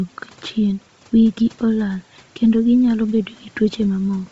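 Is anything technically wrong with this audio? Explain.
Yes. Throughout the speech, nothing sounds above 7.8 kHz, and the upper band has a breathy, grainy edge. This is likely heavy Bluetooth LC3 compression. The codec zeroes upper spectral detail and fills it with noise, which fits a bitrate near 24 kbps. Faint room noise sits about 32 dB below the speech.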